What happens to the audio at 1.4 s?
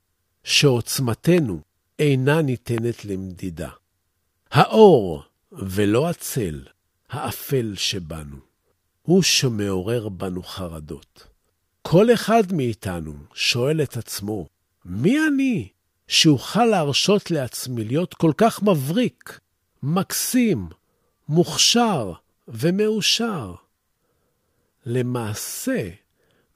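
A sudden voltage pulse, likely an electrical glitch, enters the signal from 1.38 to 1.40 s, making one sharp loud pop about 10 dB above the speech.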